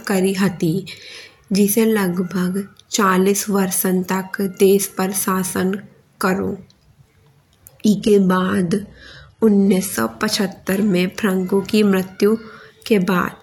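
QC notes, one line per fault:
7.94–9.94 s, adaptive stream at a lower bitrate: for two seconds the stream drops from AAC-LC at 96 kbit/s to HE-AAC at 16 kbit/s, so treble turns thin with swirly artefacts. The spectrogram shows a sudden ceiling near 11.8 kHz, and the waveform shows no gap at either switch.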